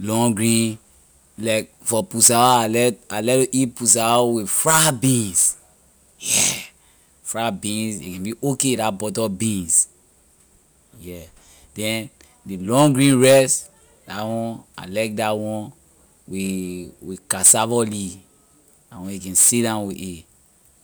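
A speech recording, with nothing technically wrong with it.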